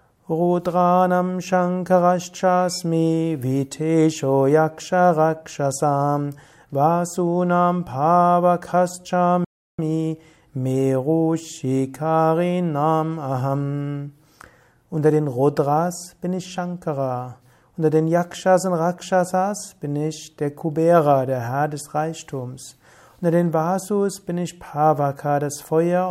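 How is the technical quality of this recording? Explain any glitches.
There's one glitch worth flagging. At 9.44 s a playback stall cuts the sound to silence for about 0.34 s, likely the player starving for data or its thread blocking, before it picks up again at 9.79 s.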